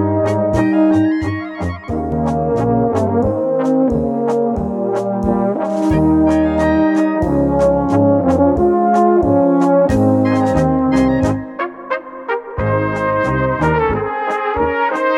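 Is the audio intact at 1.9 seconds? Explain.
No. From 0.91 to 2.12 s, channel delay (comb filtering): one channel lags by around 10 ms, and summing cancels evenly spaced frequencies from near 50 Hz, sounding hollow.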